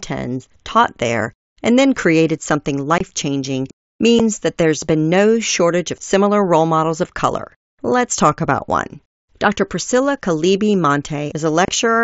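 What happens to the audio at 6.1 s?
Nothing goes wrong at 6.1 s: the speech continues intact there, carried through the mSBC Bluetooth headset path as it is throughout that passage.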